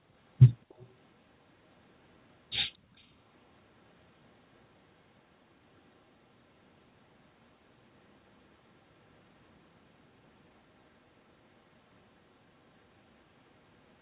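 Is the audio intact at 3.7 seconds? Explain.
Yes, the speech at 3.7 seconds is intact, with nothing beyond the normal narrowband character of a G.711 call path, which leaves nothing above 4 kHz.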